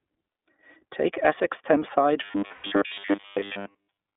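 Throughout, the speech carries iLBC codec damage: band-limited to about 250 Hz–3.6 kHz, plainly rough and synthetic, consistent with the 20 ms, 15.2 kbps mode. From 2.24 s to the end at 4.17 s, a rigid 100 Hz metallic buzz is imposed on the voice, likely from repeated short buffers, about 10 ms each, with most of the real audio skipped. Between 2.52 and 2.67 s, lost iLBC frames leave a 120 ms held, breathy vowel-like fill, fitting six dropped 20 ms frames, before normal decoding resumes immediately.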